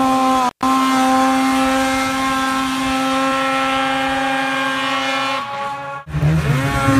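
The audio has an intermittent contact fault between 0.47 and 0.64 s: the signal drops out for about 135 ms, with crackle at the onset and release and only faint hiss in between, consistent with a loose cable or plug briefly breaking the connection.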